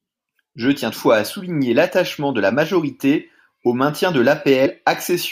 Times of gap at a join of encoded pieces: none

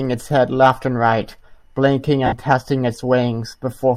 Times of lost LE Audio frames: 2.26-2.33

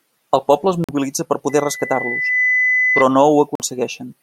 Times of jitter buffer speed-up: none

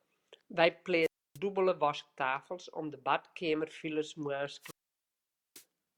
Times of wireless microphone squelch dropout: 1.01-1.38, 4.60-5.65

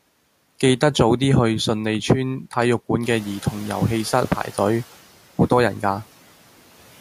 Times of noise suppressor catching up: 3.03-4.83

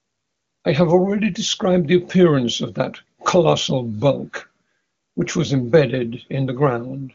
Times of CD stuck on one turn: none

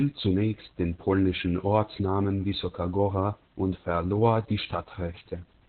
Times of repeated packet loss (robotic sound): none

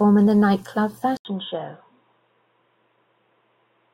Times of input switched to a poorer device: 1.17-3.93

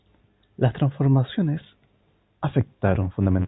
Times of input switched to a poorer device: none

